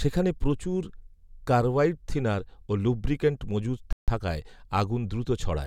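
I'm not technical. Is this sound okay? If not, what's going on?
No. Just after "কার্বাইডথিনার ও লুব্রিক্যান্ট মজুত", the speech drops to complete silence from 3.93 to 4.08 s, about 0.15 seconds, then carries on. This is likely a Bluetooth stall: wireless interference delayed the audio, so the headphones briefly ran out of sound to play.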